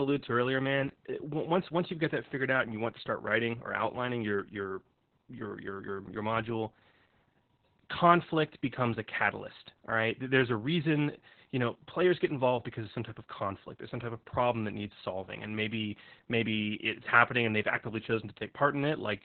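All the way through, the speech has Opus voice compression damage: nothing above 4.3 kHz, muffled and hoarse, which fits narrowband SILK coding at around 8 kbps.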